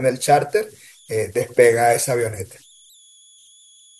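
Throughout the speech, converter idle tones sit about 33 dB below the signal. A delta-sigma converter without dither locks into repeating bit patterns at low input levels, producing a whistle around 3 kHz in pauses and grainy noise beneath quiet passages.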